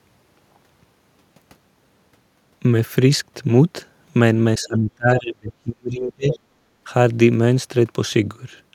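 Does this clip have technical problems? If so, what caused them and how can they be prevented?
Yes. From 4.59 to 6.35 s there is speech suppressed in double talk: the talker's level dips by up to about 35 dB, for roughly a second and a half in all. The likely cause is the echo canceller mistaking simultaneous talk for loudspeaker echo. Tuning the canceller's double-talk detector, or using a headset, prevents this.

From 6.31 to 6.39 s the other side's voice is leaking through, a short scrap around 10 dB below the talker. It is likely residual loudspeaker sound the canceller failed to remove. On a spectrogram it is a faint separate harmonic pattern overlapping the talker's. Better acoustic isolation or a headset stops this leakage.

From 6.65 to 6.82 s the background is gated by the echo canceller, dropping about 13 dB for roughly 150 ms before recovering. The canceller clamped the microphone while the loudspeaker played. 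The waveform shows a brief notch in the noise floor, and the spectrogram shows a thin, darker vertical band. Comfort-noise insertion or gentler suppression would mask it.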